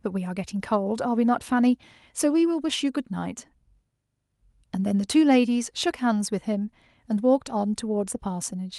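Speech recording with no audible technical fault anywhere in it.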